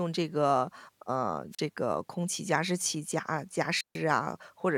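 At 1.51 s and again at 3.76 s the speech hits a wireless microphone squelch dropout: the radio link fades, hiss swells, and the receiver mutes, leaving a gap of about 39 ms the first time and a longer 145 ms hole by 3.98 s.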